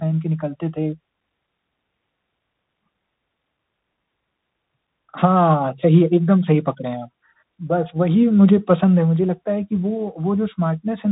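From start to finish the speech carries Bluetooth CVSD headset codec damage: one-bit delta coding, which fits 64 kbps, removes everything above 4 kHz, roughens s sounds and leaves granular hiss.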